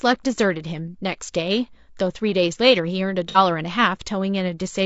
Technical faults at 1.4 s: low-delay AAC compression

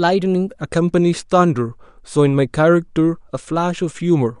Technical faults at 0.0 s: none

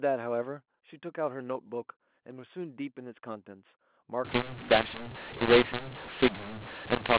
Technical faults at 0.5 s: none

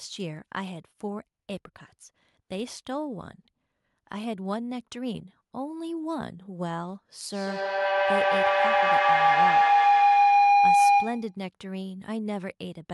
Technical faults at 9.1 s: feedback howl

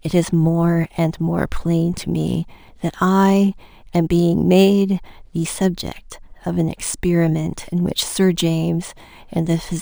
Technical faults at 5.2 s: crude rate conversion

